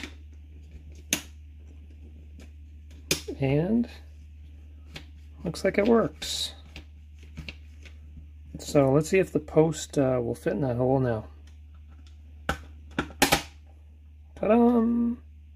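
Right near the end, from about 14.43 to 14.45 s, there's a case of frames out of order. Two neighbouring chunks of the stream got decoded in swapped sequence, so that tiny stretch plays its halves back to front. You hear a brief garbled flutter. The jumps fall on block edges, with blocks about 11.6 ms long, and nothing goes missing, so the timing carries straight on afterwards.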